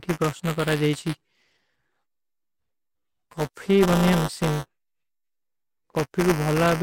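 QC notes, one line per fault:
Throughout, buffer tearing: a rattling 200 Hz buzz rides on the speech. Writer and reader cross every 5 ms period, splicing in a small slice roughly 10 ms old.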